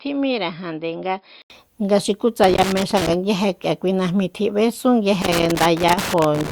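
From 0 to 1.5 s the speech sounds dull and boxy, with nothing above 5.2 kHz, a level about 5 dB lower and a faint new noise floor far beneath it. An 80 ms gap at 1.5 s then precedes fuller sound. The likely cause is an input switched to a poorer device. A spectrogram shows a hard ceiling at 5.2 kHz that lifts after a blank column.

Loose connector crackle appears from 2.44 to 3.14 s and again from 5.22 s to the end. A worn contact makes and breaks irregularly, chopping the signal into scratchy bursts. The waveform shows jagged spikes and dropouts, and the spectrogram shows scattered broadband vertical streaks.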